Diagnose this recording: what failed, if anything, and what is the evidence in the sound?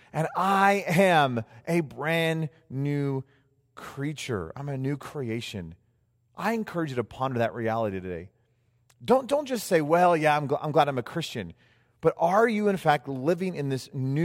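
Two isolated bit error spikes point to a digital storage or link fault: single-sample ticks at about -24 dBFS, at 0.82 s between "and I" and "am a brand new", and at 5.03 s after "creature I'm a new". One flipped bit jumps and returns, unlike a dropout's gap or a wideband analogue crackle.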